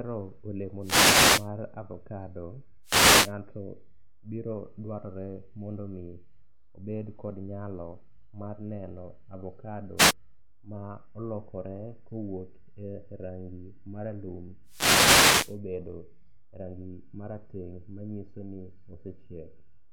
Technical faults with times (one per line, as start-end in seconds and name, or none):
0.80-1.49 wireless microphone noise hit
2.83-3.33 wireless microphone noise hit
9.97-10.13 wireless microphone noise hit
14.65-15.59 wireless microphone noise hit